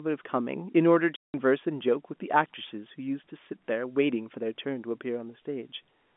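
At 1.16 s a run of packets never reached the receiver, and with no concealment in place it played packet loss filled with silence until 1.34 s. The 180 ms hole, which fits nine consecutive 20 ms packets, cuts the speech off abruptly and leaves a dead gap inside the narrow telephone band of the G.711 line. Both edges of the gap are hard cuts.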